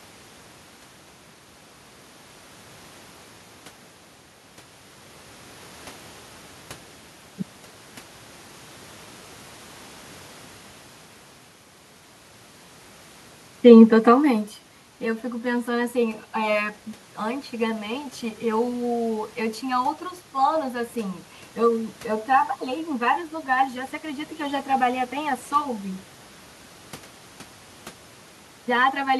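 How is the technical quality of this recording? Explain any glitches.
Nothing stood out on listening: the background noise is the room's own, and the change in level around 14 s is simply the talker shifting position relative to the microphone.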